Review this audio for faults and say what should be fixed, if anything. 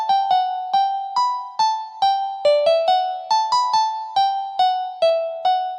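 Pre-emphasis left on, 1.6 to 5.09 s: the treble sits about 8 dB high at 10 kHz, a smooth rising shelf fitting the CD 50/15 µs curve, with the bass intact rather than thinned by a low cut. To prevent it, apply the matching de-emphasis on playback or honour the emphasis flag when transferring the audio.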